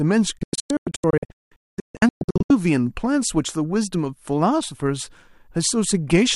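A digital broadcast dropout runs from 0.38 s to 2.50 s. Over that stretch of about 2.1 s the speech keeps breaking into silence. The gaps add up to roughly 1.46 s, and the longest single gap is 0.22 s. Each cut fades out in about 3 ms, so it sounds like an abrupt mute, not a click. The receiver lost valid frames and muted until good ones came back. The audio sent during those holes is gone.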